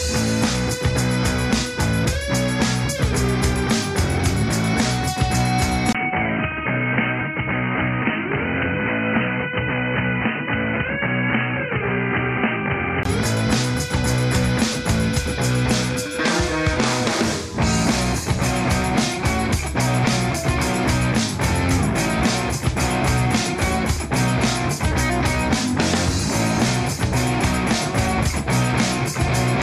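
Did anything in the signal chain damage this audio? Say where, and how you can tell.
Yes. From 5.93 s to 13.05 s the sound turns dull and band-limited, nothing above 3 kHz, with new noise roughly 35 dB down and a 20 ms gap at the switch. This is likely an input switched to a poorer device at the driver stage.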